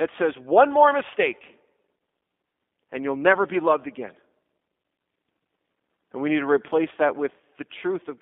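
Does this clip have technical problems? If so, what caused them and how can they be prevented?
Yes. Throughout, the speech sounds thin, rough and slightly synthetic, confined to about 200 Hz to 3.6 kHz, which fits the 8 kbit/s G.729 codec rebuilding speech from a few modelled parameters. To prevent it, use a wideband, higher-bitrate codec.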